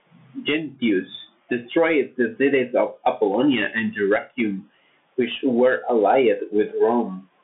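Bluetooth CVSD headset codec damage runs throughout: one-bit slope coding clips steep transients, roughening sibilants over granular hiss, with nothing above 3.8 kHz.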